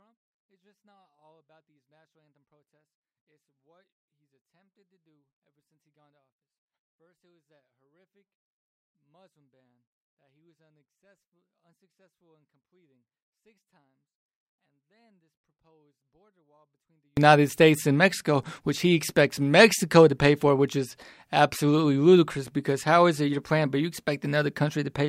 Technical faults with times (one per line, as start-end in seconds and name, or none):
0.00-17.17 24-bit alignment error (too quiet)